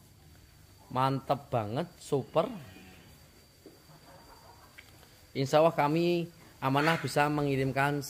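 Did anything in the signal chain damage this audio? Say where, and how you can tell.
No, nothing in the chain seems to have harmed this audio; it all sounds intact with nothing to flag at any stage.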